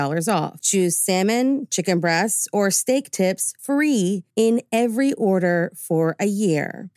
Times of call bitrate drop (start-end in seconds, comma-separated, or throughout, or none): none